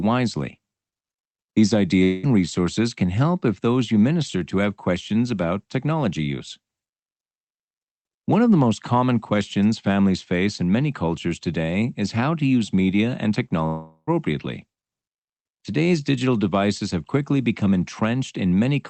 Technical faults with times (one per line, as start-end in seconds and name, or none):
2.03-2.26 long network dropout
13.67-14.10 long network dropout